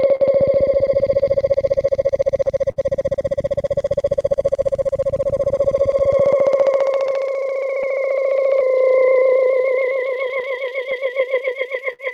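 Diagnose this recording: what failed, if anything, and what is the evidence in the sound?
The level swings by roughly 5 dB, so the sound is squashed. This gain pumping is likely a fast limiter or compressor in call processing, reacting to gain set far too high at the microphone.

Small timing hiccups recur unevenly throughout, pointing to clock drift between sender and receiver at the network and buffer stage. The sender's clock runs about 4% slow, so the receiver's jitter buffer keeps draining.

At 0.15–0.22 s and 2.71–2.78 s, a sound is held too long, for 44 ms and 49 ms. Each is a short stall from a late packet: the buffer ran empty, and the receiver stretched the last sound until the packet arrived.

From 1.24 to 11.83 s, the tempo drags slightly unevenly, playing at about 97% speed. These repeated timing corrections repeat short pieces to match the slower sender, adding around a third of a second overall.

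From 7.06 to 12.01 s, there are about seven brief smears or ticks, the longest around 50 ms. These scattered short gaps are lost or late packets, each patched by continuing the previous sound.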